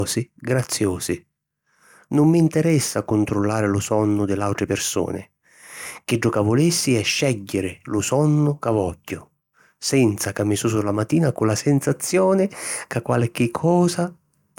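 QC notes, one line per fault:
No faults found on review of the speech.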